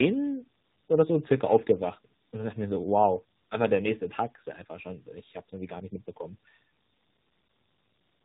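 Throughout the speech, tandem speech coding is audible: nothing above 3.8 kHz, with roughness and warble that point to two lossy coders in a row, likely an ADPCM stage at 24 kbit/s feeding AMR-NB at 7.4 kbit/s, the later one recoding the earlier one's errors. That compounded grit is what separates it from a single low-rate codec.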